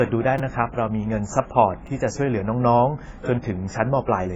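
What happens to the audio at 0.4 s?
At 0.38 s a repeated buffer occurs. A 5.8 ms chunk, fitting a 256-sample buffer, plays three extra times, heard as a brief buzz and seen as identical waveform segments with hard joins. Throughout, including this moment, the sound is dull and fizzy, likely from heavy AAC compression at a low bitrate. The spectrogram shows nothing above 7.7 kHz.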